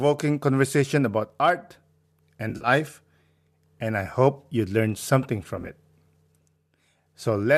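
At 2.50 to 2.68 s the speech breaks into a brief smeared, phasey patch, AAC frame loss with concealment: about 90 ms of audio is missing, scattered over 140 ms with a longest run of around 40 ms, and the decoder fills each gap by reusing the last good spectrum. Just after "hope you learn something", 5.57 to 5.69 s brings a shorter recurrence, about 60 ms lost across 120 ms in runs near 10 ms, which fits the short frames of a low-delay AAC stream, likely AAC-ELD. Unlike a hard dropout, neither gap falls silent or clicks; the holes are papered over with blurred, noisy sound.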